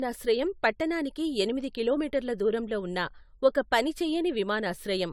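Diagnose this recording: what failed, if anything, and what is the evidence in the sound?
The codec stage likely suffered generation loss from repeated AAC-LC decoding and re-encoding, about four passes, each requantising on a shifted frame grid. Throughout, the speech sounds swirly, hollow and smeared, with blurred attacks, despite bandwidth reaching 20 kHz, which points to a bitrate near 96 kbit/s.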